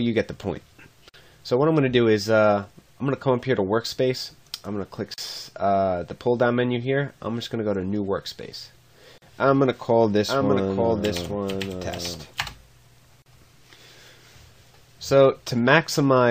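A gap at a join of encoded pieces opens at 1.09 s, lasting 48 ms, and again at 5.14 s and 9.18 s, each about 40 ms, exactly 4 s apart. The audio was encoded in separate 4-second pieces and spliced without trimming, so each encoder's start-up delay and end-of-file padding remain as brief silences. The sound drops out with smeared edges, then resumes where it left off.

A doubled audio track runs from 10.29 s to 12.43 s. A second full-band copy trails the original by about a second, roughly 5 dB quieter, with no decay or room colouring, and it cuts in and out abruptly at both ends. This is likely a second capture through a slower path, or an edit holding two misaligned copies.

The same splice gap returns at 13.22 s, about 40 ms long, continuing the 4-second pattern.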